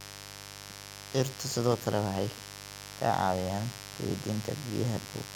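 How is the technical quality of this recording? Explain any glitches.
A steady, raspy mains buzz runs under the speech from start to finish, sitting only about 15 dB below it. It points to switching spikes from a dimmer, rectifier or unshielded cable entering twice per 50 Hz cycle, spraying harmonics well up into the kilohertz range.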